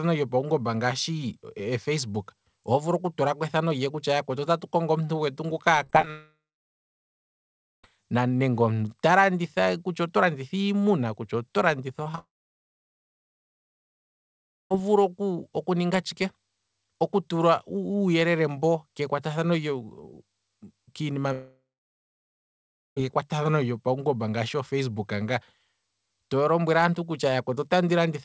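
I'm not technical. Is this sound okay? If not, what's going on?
No. There are three kinds of problem, all from the connection dropping bits of sound on the way.

From 5.84 to 6.10 s the speech turns choppy and robotic, with small pieces missing. This is repeated packet loss (robotic sound). The audio travels in tiny packets, and eight of them, each up to about 20 ms long, failed to arrive in quick succession. Each time, the receiver patched the hole by stretching out the last bit of sound it had. So many patches so close together make the voice sound mechanical.

Right after that, from 6.10 to 7.84 s, the sound trails off into a fading buzz and then goes silent, and when the speech returns, part of it is simply gone. The same happens from 12.19 to 14.71 s and from 21.32 to 22.97 s. This is a long network dropout. The likely cause is that no audio reached the listener for well over a second. 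The receiver can only stretch the last sound for a moment before giving up, so the rest is silence, and the missing speech never comes back.

Just after "iimuna kutya oto landitha", there are three tiny smears, at 12.03–12.06 s, 12.12–12.14 s and 12.15–12.19 s. This is short concealed packet loss. A packet of only about 10 to 20 ms went missing each time, and the receiver filled the gap by continuing the sound it had just played, so it comes across as a brief wobble. These lead straight into the second dropout.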